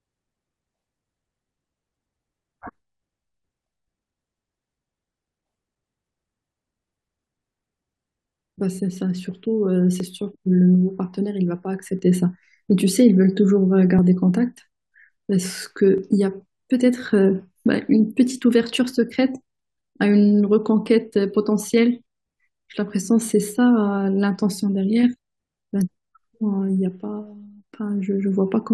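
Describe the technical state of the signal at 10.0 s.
An overlap between stream segments at 10.0 s, likely at a 2-second segment boundary, made the player trim about 7 ms of real speech, producing a tiny skip.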